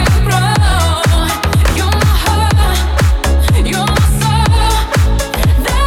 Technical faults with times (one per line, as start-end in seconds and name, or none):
none